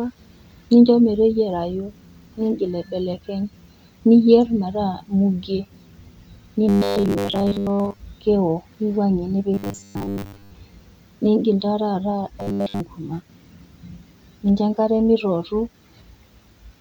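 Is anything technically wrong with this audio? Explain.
Yes. Three stretches of robotic sound from repeated short buffers, at 6.69 to 8.00 s, 9.54 to 10.51 s and 12.40 to 12.80 s. The likely cause is audio arriving too slowly, so playback loops a short chunk, which fits a 10 ms buffer, and discards most of the real signal. The speech becomes a rigid, metallic 100 Hz buzz that only loosely tracks the words.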